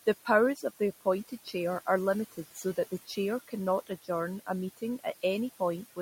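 Noise suppressor artifacts run throughout: the room noise is pulled down by about 14 dB between phrases and rises under speech, leaving patchy, pumping noise-floor texture on a spectrogram. Speech cut by the noise suppressor occurs at 0.56–0.81 s, at 1.28–1.55 s just before "are limited", and at 2.55–3.18 s just after it. Quiet speech was treated as noise and dropped by about 14–15 dB, so brief fragments sound swallowed. Each appears as a short notch in the waveform envelope and missing energy on the spectrogram.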